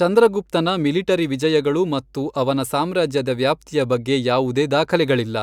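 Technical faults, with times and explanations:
Throughout, mains hum: a steady low tone at 50 Hz sits under the speech, roughly 35 dB below it. A ground loop or nearby transformer lets the power line leak into the signal. The hum never changes, so it stays audible in every pause.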